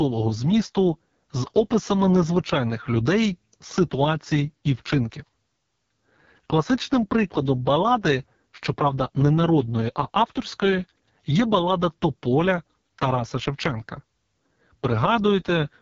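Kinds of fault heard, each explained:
AMR wideband (HD Voice) codec: the speech has been squeezed through the wideband mobile codec at its lowest rate, which sounds like about 6.6 kbit/s, and the damage is heavy. Voiced sounds turn rough and raspy as the pulse-driven vocal tract model struggles, and nothing remains above about 7.1 kHz. Unlike narrowband telephone coding, which stops near 3.4 kHz, the top band here stays present but is only shaped noise.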